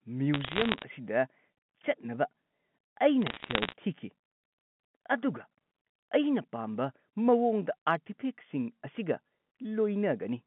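Bit errors on a digital phone line hit from 0.34 to 0.84 s and again from 3.22 to 3.73 s, at roughly 0.5% and 0.7% of bits flipped. Each corrupts a single G.711 sample, and hits on high bits produce sharp ticks that crackle over the narrowband speech.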